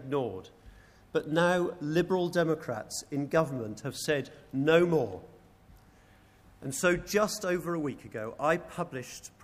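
No technical faults can be heard anywhere in the audio, with no break in the signal at any point.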